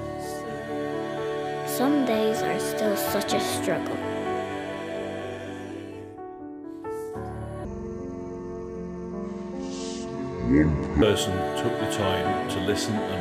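From 7.65 s to 11.02 s, a section at the wrong speed plays at 0.607 times its proper rate, so the audio sags about ten semitones and drags. On a spectrogram, harmonics crowd downward and features stretch wider. The likely cause is playback against a mismatched clock.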